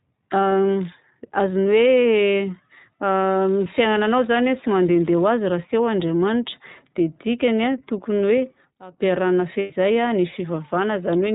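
Throughout, the speech sounds band-limited and slightly rough and synthetic, with nothing above 4 kHz. This is the iLBC codec at work. Each 20 ms frame's excitation is coded independently, and the plainly audible damage fits its 15.2 kbps narrowband mode.

From 3.26 to 5.28 s a steady, even hiss sits under the speech at about 25 dB below it, with no grinding distortion. This is low bit depth with dither. The signal was rounded to roughly 6 bits with dither added first, so the rounding error became flat white noise.

From 8.38 to 9.11 s a single piercing tone at 5.6 kHz swells up over about a third of a second and ends up louder than the speech, by about 5 dB. This is loudspeaker feedback squeal. The microphone was picking up its own loudspeaker, and at that frequency the loop gain exceeded one, so the tone fed on itself.

From 9.60 to 9.72 s, a 100 ms stretch turns into a held, slightly buzzy vowel-like sound, and then normal speech resumes almost immediately. 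These are lost iLBC frames, which points to about five dropped frames. The decoder filled the gap by repeating the last pitch cycle mixed with noise.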